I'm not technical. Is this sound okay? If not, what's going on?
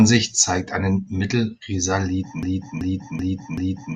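No, it isn't. At 0.70 s and again at 2.22 s the speech jumps forward very slightly, leaving a quick smudged blip. This is compressed frames skipped: the audio is stored in short blocks, and one block was missing or rejected as damaged, so a sliver of about a fiftieth of a second never plays. That gap fits a block length of about 21 ms. Because neighbouring blocks blend into each other, you hear a soft smear, not a sharp click.

From 2.43 s to the very end, the sound turns into a broken-record loop. A fragment about 0.38 s long plays four times in a row, exactly the same each time, like a scratched record. The likely cause is that the player or stream stalled and kept resending the last bit of audio it held. Whatever should have been heard in those final seconds is lost.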